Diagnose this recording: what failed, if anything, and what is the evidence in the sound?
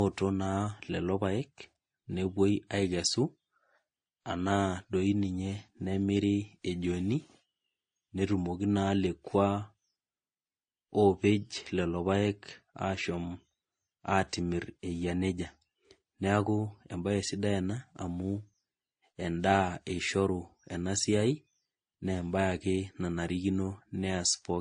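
Throughout the speech the top end stops dead at about 9.7 kHz, and the artefacts of three different coders are heard together at once. This is a codec-stage fault, likely transcoding between lossy codecs. The sound points to an MP3-style encode at a low rate, then an AAC-type pass, then a WMA-like final stage. Each later encoder spent bits reproducing the earlier damage, and the lowest cut-off survived.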